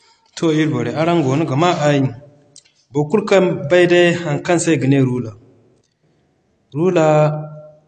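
Throughout the speech, nothing is present above 8.5 kHz, and the top sounds dull. The likely cause is low-bitrate audio saved at a high bitrate. An earlier low-bitrate encode removed that detail. Re-saving at a high bitrate cannot restore it.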